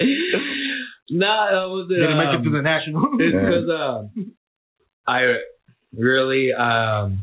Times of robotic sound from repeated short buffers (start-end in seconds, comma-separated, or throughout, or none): none